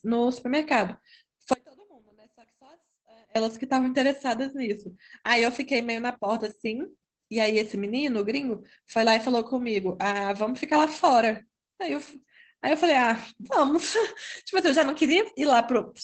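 A speech recording, muffled, slightly hoarse and faintly robotic throughout, with nothing above about 8 kHz, which fits Opus voice compression in SILK wideband mode at a low rate near 12 kbps. From 1.53 to 3.36 s the speech abruptly vanishes for 1.82 s, leaving only a faint trace roughly 30 dB down. This is an audio dropout to a faint residue, likely from the signal being lost while the path stayed live.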